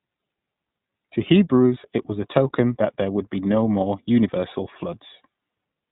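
From start to finish the speech sounds boxed-in and telephone-like, with nothing audible above about 3.8 kHz. The voice carries a rough, slightly synthetic grain. That is plainly audible iLBC codec damage. The narrowband iLBC codec works in 20 ms frames, and the rate is consistent with its 15.2 kbps mode. Each frame's excitation is coded on its own without help from the previous one, and at this low rate fine vocal texture is lost and a buzzy, artificial edge is left behind.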